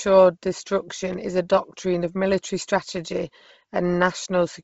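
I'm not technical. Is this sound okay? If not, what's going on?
No. The speech was likely squeezed hard by Bluetooth LC3 compression throughout, so it sounds breathy and grainy, with nothing above 7.7 kHz, leaving it dull.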